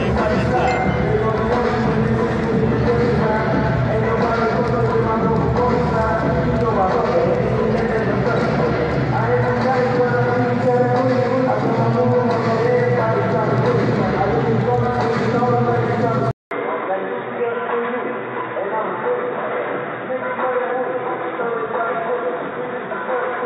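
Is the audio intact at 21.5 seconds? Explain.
No. At 21.5 s the audio is inside a stretch from 16.31 s to the end of the clip where the sound has turned dull and band-limited. Nothing is present above 3.8 kHz. A 200 ms silence marks the change at 16.31 s. Afterwards the level sits roughly 5 dB lower, with a faint new noise floor far below the signal. This is likely an input switched to a poorer device, whose narrower band and own tone replace the original pickup.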